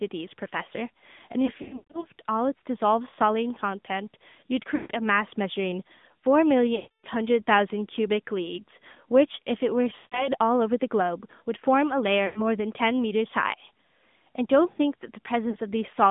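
Throughout this speech clip the voice sounds thin, boxed-in and plainly buzzy and synthetic. It is confined to a band of roughly 150 Hz to 3.6 kHz, with nothing bright above that. This is the AMR narrowband mobile codec, the old 2G/3G phone coder, which rebuilds the voice from a vocal-tract model and a sparse set of excitation pulses. The plainly audible damage fits a mid-rate mode of about 10.2 kbps. The sound also repeatedly smears, warbles or briefly fades out, at 1.46–2.06 s, 3.10–3.14 s, 4.76–4.91 s, 6.76–7.05 s, 9.96–10.29 s, 12.26–12.42 s and 15.50–15.56 s. These are lost AMR speech frames. The decoder is stretching the last good pitch and spectral settings with falling gain while data is missing. The short 3.1 s gap is just a quick dip. At 1.46 s about 280 ms goes missing, scattered over nearly half a second, and its longest run of 140 ms sags almost to silence. At 6.76 s another 280 ms drops out, with rougher, weaker sound as the voice returns.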